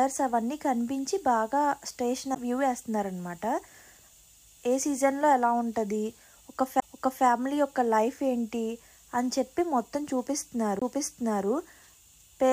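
At 2.35 s, 6.80 to 6.82 s and 10.79 to 10.82 s the sound breaks with a CD skip. The laser lost its track and landed on a different turn of the spiral, so playback briefly mutes, about 10 ms at the first skip and about 20 ms at the others, then resumes from another point. Each is heard as a tick and a sudden jump. On a waveform it shows as a short flat gap with mismatched edges; a spectrogram shows a thin broadband vertical line.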